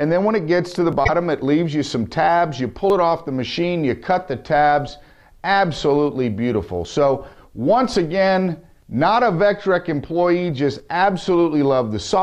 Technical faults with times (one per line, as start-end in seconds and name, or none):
0.93 audio missing between chunks
1.03-1.10 broken MP3 bit reservoir
2.90 audio missing between chunks
4.88 audio missing between chunks
6.85 audio missing between chunks
8.82 audio missing between chunks